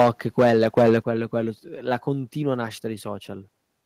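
The microphone input was likely set too high at the start, so speech peaks overran the converter by about 9 dB from 0.0 to 0.1 s and again from 0.39 to 0.97 s. This microphone overload flattens the waveform tops, a large share in the opening burst and a smaller share later, giving the loudest syllables a harsh, crackling edge.

At 1.02 s the call software likely reacted to that clipping with a microphone volume step down, cutting input gain by about 6 dB at once. Voice and background both drop abruptly in level right after the distorted stretch.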